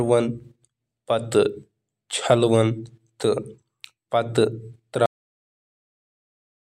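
At 5.06 s the speech just stops mid-sound, a cut-off end: the final buffers never got written, so it drops straight to digital silence without any decay.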